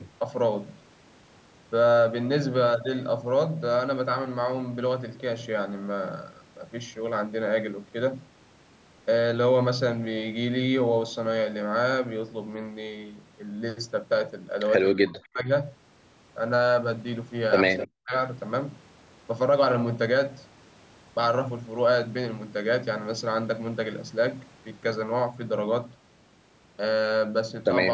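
A speech recording passed through a call's microphone processing, with nothing above 8 kHz. Twice, the echo canceller was likely unable to separate the near talker from the loudspeaker echo during double talk, and it suppressed both. Speech suppressed in double talk is heard as the speech dropping out steeply, by about 40 dB at its deepest. The first dip spans 14.95 to 15.47 s and affects a bit under half a second in all. The second is a brief cut from 18.03 to 18.14 s. An echo leak also appears twice, likely because the canceller left part of the loudspeaker signal in the microphone feed and returned it. The result is a copy of the speech delayed by 255 ms. At 15.24 to 15.29 s it is barely audible, at about 35 dB below the speech. At 17.77 to 17.88 s it is clearly heard, at only about 10 dB down.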